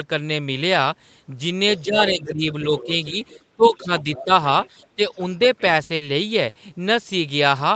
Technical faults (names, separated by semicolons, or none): other side's voice leaking through; speech suppressed in double talk; burst of packet loss